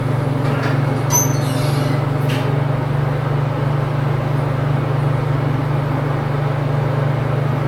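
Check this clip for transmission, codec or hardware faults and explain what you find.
One codec fault runs through the whole clip: generation loss. The sound is swirly, smeared and hollow, with blurred attacks and nothing above 17 kHz. The likely cause is repeated lossy re-encoding, about four passes, which fits a 96 kbit/s AAC-LC chain. Each pass adds fresh quantisation noise and spectral holes.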